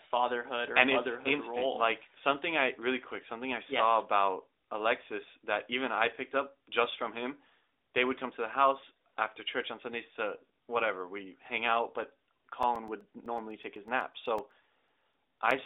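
Speech carried over an AMR narrowband mobile codec line, band-limited to roughly 300 Hz to 3.7 kHz with light codec colouring, picks up a steady ticking from 12.63 s to 15.51 s. These are periodic USB or driver dropouts: every 0.125 s, around twenty times in all, a background task stalls the USB bus or audio driver and about 2 ms of audio is replaced by silence.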